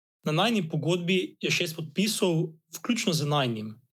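Nothing in this short speech recording stood out as a technical problem on listening.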